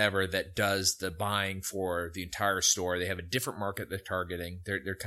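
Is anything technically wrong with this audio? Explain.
No, nothing is technically wrong.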